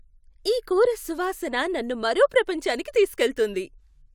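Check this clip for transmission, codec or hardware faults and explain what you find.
Listening to this speech recording, nothing stood out that would point to a problem in how it was sent, encoded or captured.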